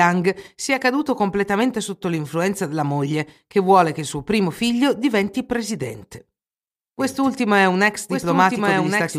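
From 7.0 s to the end, a doubled audio track appears. A second, somewhat quieter copy of the speech trails the original by about a second. It enters abruptly, with no decay or room colour. A slower second capture path is the likely cause.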